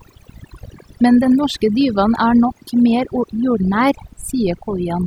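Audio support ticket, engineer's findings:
Overdone noise removal, present throughout. Noise reduction stage set too aggressive: bands near the noise estimate pulled down or gated off, taking low-level parts of the speech with them. Background drops and breaks up into twinkling specks.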